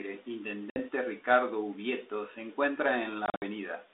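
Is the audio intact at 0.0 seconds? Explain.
Yes, the audio is intact at 0.0 s, with only the narrow telephone band of the 32 kbit/s G.726 ADPCM line to be heard there.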